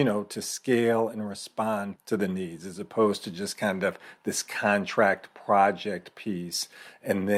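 No technical faults can be heard anywhere in the speech recording. There is nothing here that calls for a timestamp or a cause.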